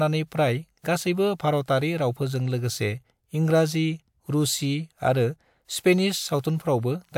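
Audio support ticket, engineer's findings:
Listened through the speech recording and found nothing that needs flagging, so no action needed on the audio path for now.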